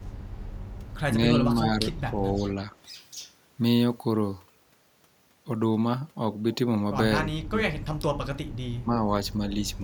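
From 0 to 0.94 s a faint, delayed copy of the speech trails the talker by 275 ms, sitting very low, around 35 dB beneath the direct voice. This is an echo leak. The likely cause is a far end playing the call over a loudspeaker, where the echo canceller failed to remove everything its microphone picked up and the residue was sent back.

Three times the talker's level sags or breaks up in pieces while the other side is speaking: at 1.29 to 2.72 s, a shallow dip of about 5 dB over roughly a second; at 7.24 to 7.86 s, a much deeper drop of about 20 dB across a few tenths of a second; and at 8.83 to 9.84 s, a dip of about 10 dB lasting a few tenths of a second. This is speech suppressed in double talk, likely because the echo canceller couldn't separate this talker from the loudspeaker echo during overlapping speech and attenuated both.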